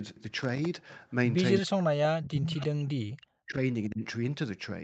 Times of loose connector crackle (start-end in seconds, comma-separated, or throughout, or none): 0.37-0.66